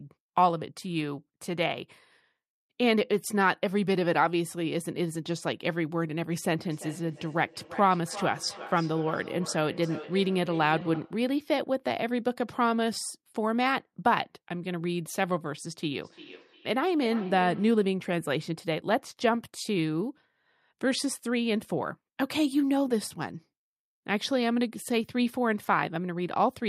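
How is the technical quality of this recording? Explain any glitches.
The speech is marred by feedback echo between two devices, from 6.59 to 11.26 s and from 16.01 to 17.86 s. Another device in the room plays the call back into the microphone. Each word returns roughly every 300 ms, thinner and ringing, peaking about 14 to 15 dB below the speech.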